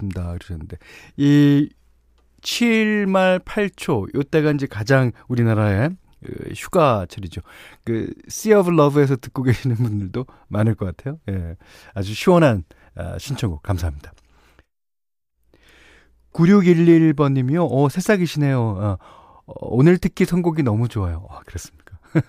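No technical faults can be heard anywhere in this recording of speech. Nothing in the audio points to a problem in how it was captured, processed or delivered.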